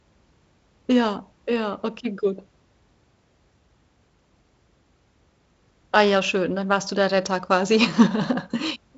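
Nothing goes wrong in this speech clip; it's ordinary G.722 wideband telephone audio, with its content stopping at about 7.7 kHz, which is what that coding gives you.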